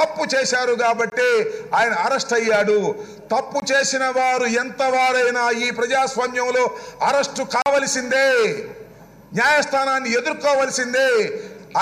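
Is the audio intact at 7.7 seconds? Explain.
No, not quite. Right around there, from 7.62 to 7.66 s, there's a block of digital silence: 40 ms of samples got zeroed, likely because the output buffer wasn't filled in time. The sound drops out abruptly and snaps back, so you hear a short hole.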